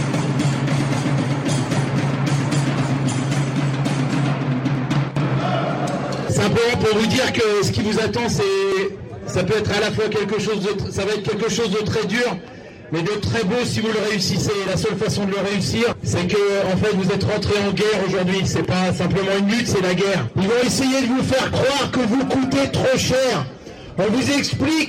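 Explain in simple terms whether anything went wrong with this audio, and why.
The loudest moments crackle from start to finish, a sign of hard clipping. The sound was pushed louder than one stage could carry, so its peaks were sliced flat. Only a small share of the audio goes over, which is why it crackles rather than buzzing constantly.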